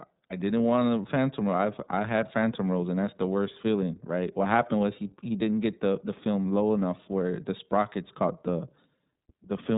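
From start to finish, this speech has the sound of the iLBC codec, a narrowband VoIP coder. Each short frame is coded on its own, without leaning on the one before. The frame length and bitrate point to iLBC's 30 ms mode at about 13.33 kbps. Nothing above 3.8 kHz survives, so the audio is muffled and telephone-like. The codec damage is plainly audible. The speech stays clear but sounds rough and synthetic.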